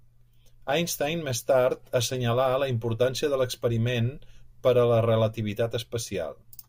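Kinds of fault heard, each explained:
No technical faults heard.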